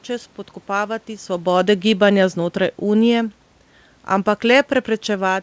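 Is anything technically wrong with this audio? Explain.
Yes. Automatic gain falling, from 0.71 to 3.47 s: the gain control judged the input too loud or its background noise too strong, and lowered its gain by about 4 dB over those seconds. The speech starts loud and then sinks, and the room background sinks with it, unlike the talker's own movement around 1 s.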